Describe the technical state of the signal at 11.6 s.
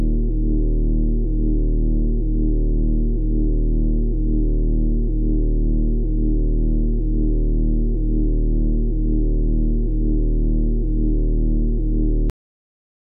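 At 11.6 s the audio is intact, with no dropout, distortion, glitch or other technical fault at that point.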